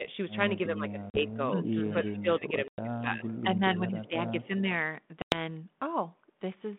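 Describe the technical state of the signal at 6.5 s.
At 6.5 s the signal is intact, with nothing wrong beyond the light coding texture of the 32 kbit/s G.726 telephone path it travels through.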